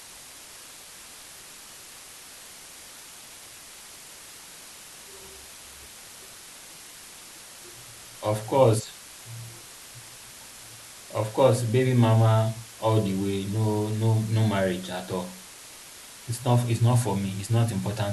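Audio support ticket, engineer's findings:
Low bit depth with dither, throughout the speech. Constant, even hiss, roughly 20 dB below the speech, consistent with about 6-bit resolution. Dither turns rounding error into steady white noise. Undithered truncation would instead give gritty distortion that follows the signal and drops out in silence.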